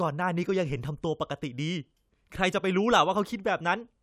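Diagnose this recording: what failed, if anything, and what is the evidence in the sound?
No fault is present.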